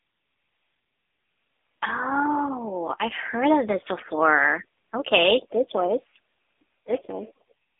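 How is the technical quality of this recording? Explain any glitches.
Technical quality is limited by one fault that runs through the whole recording: AMR narrowband mobile codec damage. It is plainly audible. The speech is squeezed into a telephone band of roughly 250 Hz to 3.6 kHz, and nothing passes above 3.7 kHz. The codec rebuilds the voice from a vocal-tract model fed by a few pulses per short frame. At this low rate the voice turns buzzy and synthetic. The sound points to a lower AMR-NB mode, around 7.4 kbps.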